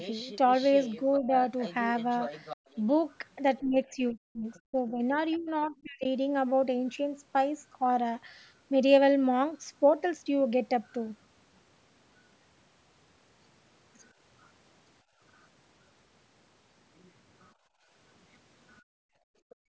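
From 0 to 2.97 s a faint second voice sits about 20 dB under the main speech. This is the other side's voice leaking through, likely because the far end's loudspeaker sound was only partly cancelled at the microphone. Inside that stretch, from 1.22 to 1.32 s, the main speech dips a little, roughly 5 dB. That is speech suppressed in double talk: with both voices present, the echo canceller likely pulled the talker down along with the echo.

At 2.57 to 2.68 s the room sound itself drops by about 34 dB and then returns. This is background gated by the echo canceller, which clamped the microphone while the loudspeaker played. It is a hole in the ambience, not a dip in speech.

From 3.61 to 6.05 s the double-talk suppression is much heavier. The talker is pulled down by as much as 40 dB over about one and a half seconds. From 4.54 to 6.07 s leaked far-end speech is also present, about 30 dB down.

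The background gating returns at 15.03 to 15.2 s, about 16 dB deep. It returns again from 17.54 s to the end, about 34 dB deep, with a brief leaked fragment at 19.5 to 19.55 s. The band-limiting to 8 kHz from the call microphone processing is separate and expected.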